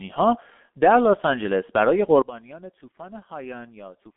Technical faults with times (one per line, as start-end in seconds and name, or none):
0.00-4.16 G.723.1 codec
2.22-4.16 sudden gain jump